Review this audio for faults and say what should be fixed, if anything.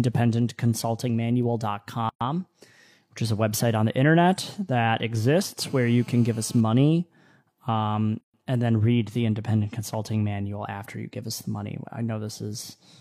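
Pieces of this speech were encoded separately and joined without trimming, so each join keeps the encoder's start-up delay and padded last frame. The result is a gap at a join of encoded pieces: a silence of 117 ms from 2.09 to 2.21 s, and 130 ms from 8.21 to 8.34 s just before "and then read the." The joins fall six seconds apart, with smeared edges, and the speech resumes where it stopped. Trimming encoder delay and padding at every join, or encoding the whole recording in one pass, prevents this.

A 2G phone on a call nearby was transmitting in bursts 217 times a second, and the audio circuitry rectified those radio pulses. This GSM phone buzz appears from 5.61 to 6.61 s, right after "on the internet that," as a steady, raspy 217 Hz buzz rich in harmonics, about 27 dB below the speech. Keeping phones away from the recording chain, or switching them to airplane mode, prevents it.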